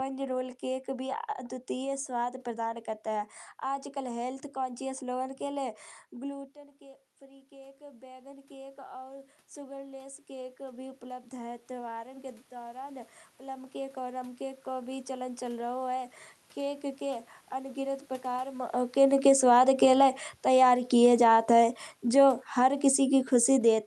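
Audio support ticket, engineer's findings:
Automatic gain rising, 6.2 to 16.94 s, after "कॉन्शियस लोगन के लय": voice and room noise swell together over roughly ten seconds. The talker drops back around 6 s, input falls by about 18 dB, and the AGC climbs about 17 dB to compensate, lifting the background with it. Ends before "के अंगिनत प्रकार मौका".

Automatic gain falling, 19.1 s to end, after "के अंगिनत प्रकार मौका": the level is loud at onset, then speech and background sink together. The talker moves around 18.5 s, and the AGC, still holding high gain from the earlier rise, pulls its gain back down gradually.

Audible band tops out near 12 kHz with coding texture, consistent with an Opus call path at a rate that fits about 48 kbps.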